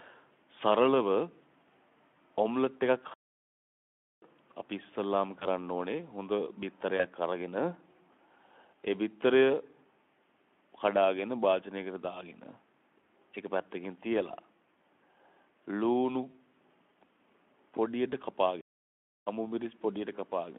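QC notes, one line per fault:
2.14 s, 5.39–5.46 s, 6.98–7.07 s, 13.02 s, 16.31–16.35 s: VoIP packet loss concealed by the speech codec. At each point one 20 ms frame is missing. The Speex decoder bridges it by repeating its last pitch and spectral envelope at falling gain, giving a short buzzy or smeared patch in the speech. Because the decoder state carries forward, the speech just after these gaps stays weak or rough for a few tens of milliseconds.
3.14–4.22 s and 18.61–19.27 s: playback stall. Output drops to silence mid-phrase for about 1.08 s and then 0.66 s before the speech resumes. The likely cause is the player starving for data or its output thread being blocked. The silence is a clean dropout, not a concealment tone. The band-limited 300–3400 Hz Speex signal simply stops and restarts at the gap edges.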